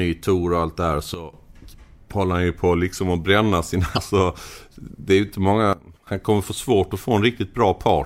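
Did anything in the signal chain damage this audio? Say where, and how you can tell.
Yes. Two sudden gain jumps: right after "och allt det här" the level drops about 13 dB from 1.14 to 1.33 s, and after "det är ju inte" about 15 dB from 5.73 to 6.07 s, voice and noise together, snapping back before "kommer få svårt att". Likely a gain stage switching with no ramp.

Around 3.93 to 3.98 s there's a short blip. That's damaged data in the compressed stream at the codec stage. The decoder hit bad frames, lost sync and jumped to the next frame header it could find.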